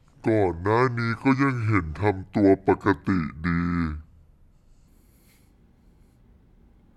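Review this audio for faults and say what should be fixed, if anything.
A section at the wrong speed runs from 0.0 to 4.88 s. The speech plays at 0.63 times speed, roughly seven semitones low, deep and dragging. A likely clock mismatch during editing or playback caused it. To prevent this, confirm that every section is rendered and played at the sample rate it was recorded at.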